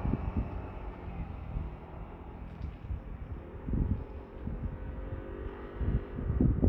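No technical faults can be heard anywhere in this audio.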